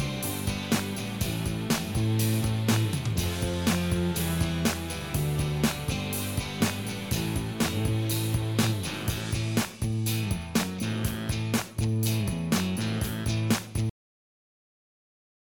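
At 13.90 s the sound stops abruptly mid-event. This is a cut-off end. The final stretch of audio was never written out or played. There is no decay or fade. The signal drops straight to digital silence, which lasts to the clip's end.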